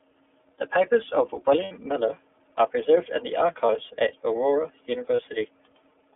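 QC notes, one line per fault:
throughout: iLBC codec. The speech is confined to a narrow telephone band. Almost nothing sits below 300 Hz or above 3.5 kHz, which gives a thin, boxed-in tone. Each frame's excitation is coded on its own, which fits the 13.33 kbps mode with 30 ms frames. This adds a plainly audible rough, slightly synthetic grain. On a spectrogram the energy stops at a flat ceiling near 3.5 kHz with a clear floor at the bottom, and the harmonics look slightly smeared.
1.65–1.72, 3.65–3.70, 5.16–5.20: lost iLBC frames. Three short dropouts occur: the first right after "papers of", the second right after "are preserved in the", the third at 5.16. The first lasts about 60 ms, which fits two lost frames, and the others about 30 ms, which fits one each. The decoder fills each gap by repeating the last pitch cycle blended with noise, so it sounds like a brief held, buzzy vowel. 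Speech resumes almost immediately afterwards. On a spectrogram each gap shows frozen, evenly repeated harmonic stripes with added noise haze. On the waveform it appears as a short stretch of similar repeating cycles.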